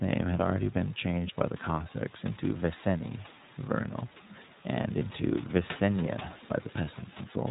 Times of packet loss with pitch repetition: none

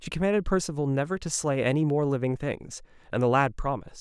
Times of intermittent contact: none

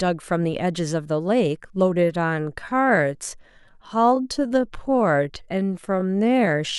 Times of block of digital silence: none

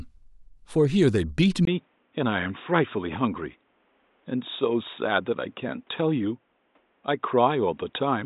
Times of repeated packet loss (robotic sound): none

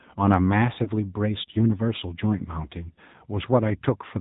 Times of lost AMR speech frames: 0.84-0.90, 2.94-3.00

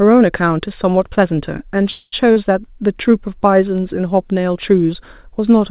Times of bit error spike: 3.78

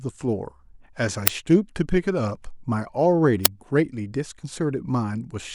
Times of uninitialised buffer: 1.27, 3.45

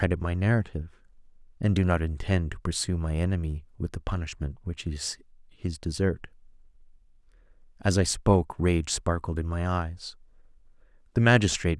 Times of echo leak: none

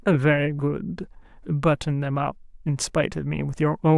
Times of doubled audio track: none

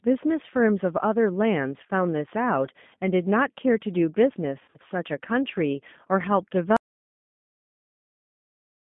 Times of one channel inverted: none

